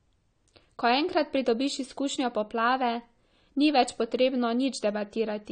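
AAC compression damage runs through the whole of this speech clip. Nothing survives above 9 kHz, and the remaining spectrum sounds dull and smeared with a warbling, fizzy texture on sustained sounds and sibilants. The likely cause is AAC-LC encoding starved of bits, consistent with roughly 32 kbps.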